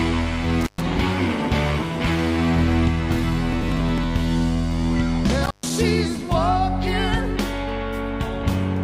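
Intermittent contact breaks the audio twice, at 0.61 to 0.82 s and 5.43 to 5.70 s: a loose connection opens for about 119 ms and 128 ms, leaving faint hiss between crackly edges, seen as near-flat waveform gaps bounded by vertical spectrogram spikes. Processor overload crackle runs from 3.41 to 4.04 s, where around ten short buffers, which fits buffers of roughly 5 ms, were skipped, causing gritty tearing seen as a dense cluster of thin broadband streaks.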